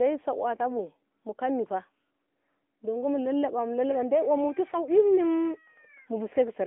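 Speech that has passed through the AMR narrowband mobile codec for its whole length: nothing reaches above 3.8 kHz, and the energy sits in a telephone band of roughly 250 Hz to 3.5 kHz, so sibilants are dull and the low end is thin. The codec damage is plainly audible as a buzzy, synthetic quality, which fits a mid-range rate of about 10.2 kbps. On a spectrogram the energy stops at a flat ceiling near 3.8 kHz.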